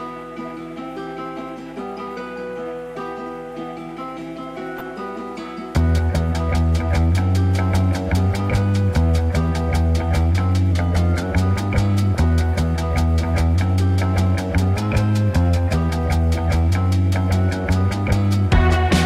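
From 4.78 to 4.81 s there is DAB burbling: a brief patch of noise blips. Weak reception let bit errors slip past error correction. Corrupted samples put short blips of noise in single sub-bands, which points to a few corrupted frames. At 10.72 s the sound drops about 6% in speed and roughly a semitone in pitch, then returns at 11.23 s. This is likely a drift correction step, a clock-matching rate change. Burbling returns from 12.15 to 12.24 s, over slightly more frames. From 14.76 to 15.73 s speed rises about 6% and pitch about a semitone before snapping back.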